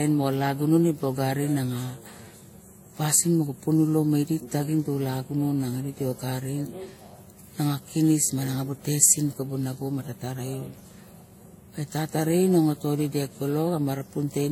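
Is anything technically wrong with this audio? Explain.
Yes. Throughout the speech there are signs of transcoding between lossy codecs. Nothing is present above 16.5 kHz, and two distinct sets of compression artefacts are heard layered together. This is likely a Vorbis encode at around 48 kbit/s re-encoded to WMA 1 at a similar rate, with the second encoder spending bits on the first one's artefacts and adding its own. A single low-bitrate encode would show one consistent artefact character. Here the mixed textures are what set it apart.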